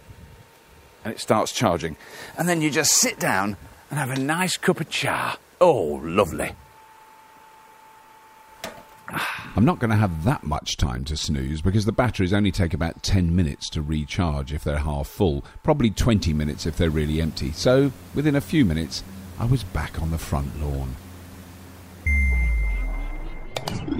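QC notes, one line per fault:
No faults found in this clip. Nothing here calls for a timed entry.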